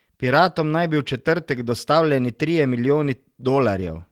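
Speech, with clock drift between sender and receiver running the whole length: the sending clock is about 2% slow relative to the receiver, so the jitter buffer keeps draining faster than it is refilled. To avoid running dry, the receiver has to stretch the incoming stream, and the drift shows up as a faint unsteadiness in pacing rather than any single obvious break. That stretching is heard as repeated timing corrections from 0.29 s to 3.73 s. Short pieces are repeated at uneven intervals, always in the same direction, so the speech plays back at roughly 98% of its original rate and picks up something like 70 ms of extra duration over that span. Each individual repeat is small, coming across as a slight hiccup or a momentary drag in tempo rather than a clear glitch.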